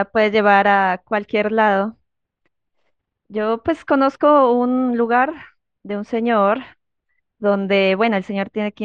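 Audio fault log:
No faults are heard in this speech clip. Nothing in the audio calls for an entry in this log.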